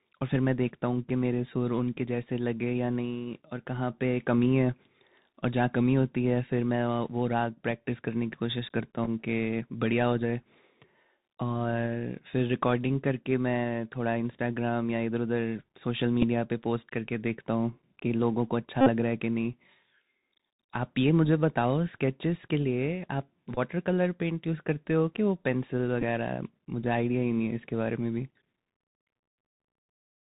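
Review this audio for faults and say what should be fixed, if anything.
The speech carries Bluetooth CVSD headset codec damage throughout the clip, and it is plainly audible. The band stops at 4 kHz. Sibilants come out scratchy, and a granular hiss sits under the voice. Loud, bright passages distort where the one-bit delta modulator's adaptive step cannot keep up with the waveform, which fits 64 kbit/s CVSD. Fix: record on the device's own microphone or a wideband (mSBC/LC3) headset link rather than the narrowband CVSD profile.

Bluetooth headset packet repeated occurs five times. At 9.04–9.08 s about 15 ms of audio is lost, scattered over 30 ms in runs of roughly 4 ms at most, and it is heard as small ticks. At 16.22–16.24 s (7.5 ms), 23.55–23.58 s (18.8 ms) and 26.01–26.03 s (11.2 ms) the chip replays the previous packet, and this produces brief buzzes. The longest run, 18.81–18.89 s, replaces 52.5 ms with repeats every 3.75 ms, which gives a steady buzz near 267 Hz. 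Fix: shorten the headset-to-phone distance and reduce 2.4 GHz interference so radio packets are not dropped.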